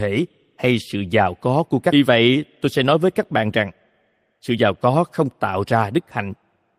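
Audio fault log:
1.92 to 1.94 s, skip ahead: about a second and a half of speech is missing, dropped while later audio was already queued. Playback jumps straight across with no silence filling the gap, so the two sides of the cut are joined almost directly.
2.04 to 3.68 s and 4.50 to 6.30 s, jitter buffer speed-up: the receiver held excess audio and trimmed many short pitch-period pieces to reduce delay. Speech runs at 106% and then 110% speed, losing about 0.1 s and 0.2 s, hurried but unchanged in pitch.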